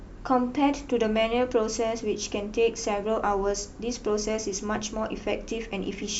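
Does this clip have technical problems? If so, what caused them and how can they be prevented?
No, nothing stood out as a technical problem on listening to this speech clip, so there is nothing to trace back or prevent.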